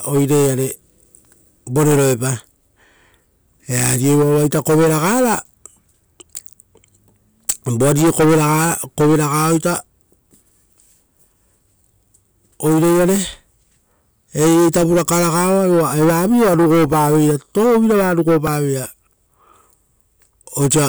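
The clip is speech with one repeated buffer fault at 18.47 s. A tiny slice of about 1.33 ms plays three extra times with hard joins, which fits a 64-sample buffer replayed when new audio arrived late. Because the buffer is so small, it sounds like a brief click or buzz. A few milliseconds of audio go missing.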